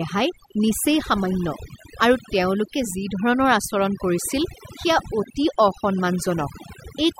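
Overdone noise removal runs throughout the speech. A noise reduction stage set too aggressively cuts frequency bands it judges to be noise, taking quiet parts of the voice with them, so the background drops and breaks up into twinkling specks.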